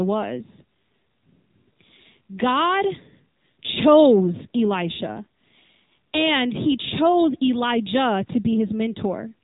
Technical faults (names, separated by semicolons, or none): AMR narrowband mobile codec